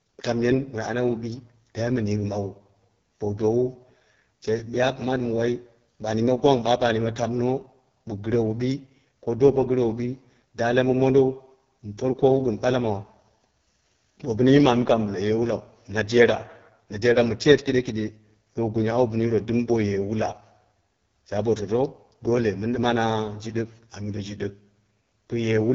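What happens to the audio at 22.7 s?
At 22.7 s the speech is still running through the AMR wideband (HD Voice) codec, as it does for the whole clip. The harsh, raspy texture fits its lowest 6.6 kbit/s mode, where too few pulses drive the vocal tract model. Nothing reaches above 6.9 kHz.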